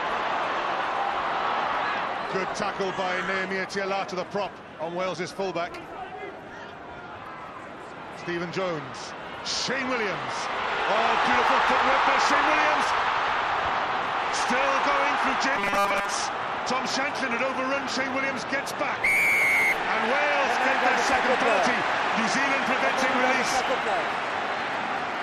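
From 15.56 to 16.13 s the sound collapses into a rigid, metallic 200 Hz buzz, robotic sound from repeated short buffers, that only loosely tracks the underlying contour. The likely cause is new audio arriving too seldom, so a tiny 5 ms slice is looped in place of most of the real material. On a spectrogram this shows as evenly spaced horizontal harmonics at multiples of 200 Hz; the waveform shows the same short cycle copied over and over.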